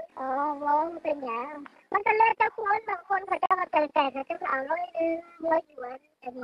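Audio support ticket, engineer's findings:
Brief mute, about 50 ms, 3.46 to 3.51 s; audio drops to silence and resumes later in the programme, nothing in between recovered. Digital broadcast dropout at receiver/decoder: corrupt or missing frames failed checksum, output muted until valid frames returned. Gap length consistent with roughly two lost frames.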